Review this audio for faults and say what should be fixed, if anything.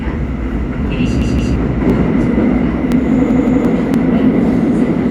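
Overlapping chunks occur at 0.88–0.90, 1.90–1.92, 2.92–2.94 and 3.94–3.96 s. Each chunk starts 21.33 ms early, so that sliver plays twice. This causes a stutter every 1.0 s. Trim each chunk's start to exactly where the previous one ended.

A repeated buffer occurs at 1.22–1.56 and 3.31–3.65 s. A 170.67 ms piece plays two extra times with hard joins, which fits an 8192-sample buffer. About 0.3 s of real audio is lost each time. Enlarge the playback queue or speed up delivery so new buffers arrive in time.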